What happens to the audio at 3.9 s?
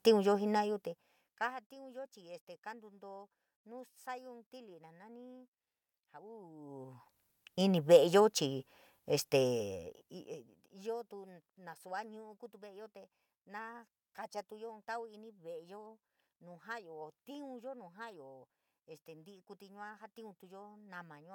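At 3.9 s the speech runs on intact, with no dropout, distortion or glitch to be heard.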